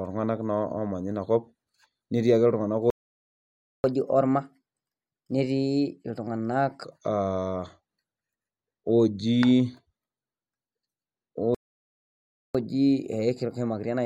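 The speech cuts out mid-flow into silence from 2.90 to 3.84 s and again from 11.55 to 12.55 s, nearly a second each time. This is a playback stall, likely caused by the player running out of buffered data or its thread being blocked. After each gap the speech resumes fast and raised in pitch. From 3.84 to 6.84 s it runs at 1.15 times normal speed, about two semitones up. From 12.55 s to the end it runs at 1.1 times, roughly a semitone and a half higher. This is catch-up at higher speed: the player resamples its backlog to win back the lost time.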